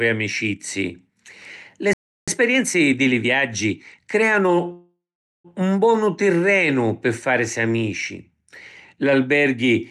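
At 1.93 s the speech just stops dead for about 0.34 s, until 2.28 s. That's a playback stall, most likely the player running dry or its thread getting blocked so the output sat silent.

Right after, from 2.28 to 4.54 s, there's time-compressed catch-up: the player trims its backlog by snipping and cross-fading tiny slices, so the speech runs about 1.15 times fast at normal pitch, hurried.

Then at 4.72 s comes a call audio freeze lasting to 5.47 s, about 0.72 s, likely from packets held up in transit draining the jitter buffer. The last sound smears on as a fading buzz, with roughly 0.45 s of that near-silent, and the speech resumes exactly where it stopped. Nothing's missing, just a gap pushed in. Throughout, the top end rolls off around 12 kHz, which fits an Opus call path.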